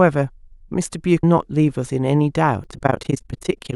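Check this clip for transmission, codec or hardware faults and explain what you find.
Two codec-side faults are audible.

At 1.23 s, compressed frames were skipped: a run of frames was missing or rejected by the decoder as damaged, so about 400 ms of speech is missing, which fits roughly fifteen 32 ms frames.

From 2.64 s to the end, there is overlap-add ripple: the speech was resynthesised from windowed frames whose overlap doesn't sum to constant gain. The level swings by about 60 dB around 30 times a second, giving a harsh, robotic flutter.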